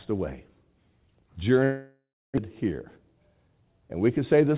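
From 1.64 to 2.40 s the sound smears into a fading buzz, then silence, and resumes with a piece missing. This is likely a long network dropout, far longer than single-packet loss.

From 2.49 to 3.43 s, a jitter buffer speed-up runs the speech 10% fast at unchanged pitch, dropping about a tenth of a second. A resampling fault would shift the pitch instead.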